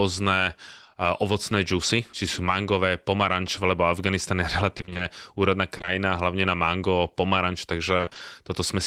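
A speech clip with two bursts of repeated packet loss, heard as a choppy, robotic stretch, at 4.77 to 5.01 s and again at 7.97 to 8.21 s. In each burst six gaps of about 20 ms come one after another, and half of that quarter-second is filled in by stretching the last bit of sound. So you get that choppy stutter with chunks of speech missing rather than a clean dropout. In between, around 5.77 to 5.89 s, there are three short concealed packet losses back to back, starting at 5.77, 5.81 and 5.85 s, each a 20 ms hole patched by carrying the previous sound forward and blending back in. These come across as a brief smear or wobble, and a quick consonant in there can get swallowed.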